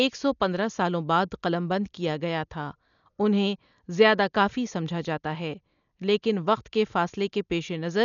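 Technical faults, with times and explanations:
Throughout, Dolby Digital compression: the speech sounds dull, with nothing above 7 kHz, and a rough, fluttering noise clings around the voiced sounds. This points to a heavily starved encode at a low bitrate, on the order of 48 kbps. The likely cause is an AC-3-style coder that cut the band short and gave many frequency lines no mantissa bits, so the decoder filled those gaps with dither noise that shifts from block to block.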